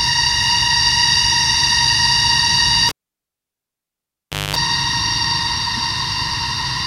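A cable pulled and plugged in interrupts this recording of everyday sound between 2.89 and 4.56 s. A pop marks the moment the live lead is yanked out, and the signal drops to near silence for about 1.6 s. As the plug goes back in, the tip touches first with the ground not yet connected, letting roughly 220 ms of 50 Hz mains buzz through before a second pop as the connection seats and the sound returns.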